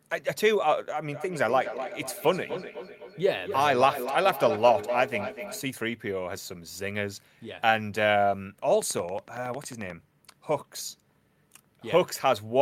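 From 1.12 to 5.66 s there is feedback echo between two devices. Each phrase returns at a fixed interval of about 300 ms, thinner and more ringing, peaking about 9 dB below the speech. Room reverberation would smear the sound rather than repeat it. From 8.82 to 9.91 s a train of clicks, around fifteen regular pops at 11.1 per second, rises a few dB above the signal. These are likely interference, evenly spaced rather than scattered like random crackle.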